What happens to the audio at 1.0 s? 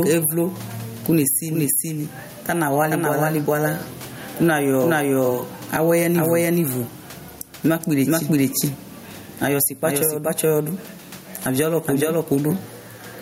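At 1.0 s the speech is heard twice, a doubled audio track that runs through the whole clip. A second full-band copy trails the first by roughly 400 ms at about the same level, likely because the signal is captured again through a slower path. Unlike an echo or reverb, the copy does not decay or pick up room colour. It repeats cleanly and as loud as the original, so the two layers blur each other.

The same moment also shows gain pumping, present throughout. The level swings by something like 15 dB. Underneath is the quiet background, the room noise about 38 dB below the speech. The likely cause is input gain set far too high, with a fast limiter clamping it on every peak. This differs from a noise gate, which cuts the background off in the gaps. Here loud and soft passages sound flattened and squashed together.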